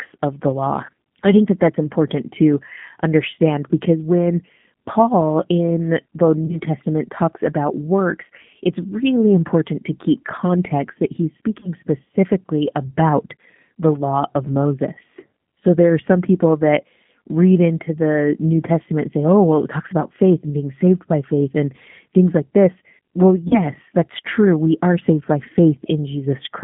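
Throughout, the speech is coded with G.729 at 8 kbit/s, confined to 150 Hz to 3.4 kHz, so it sounds thin, plainly rough and synthetic. VoIP packet loss concealed by the speech codec follows at 6.46–6.57 s after "in the", at 11.60–11.69 s between "keep context that he's" and "specifically about the law", and at 23.48–23.60 s before "that's true". Each gap fits a single lost 30 ms packet, which the decoder filled by extending the previous sound with a lowering gain until it faded.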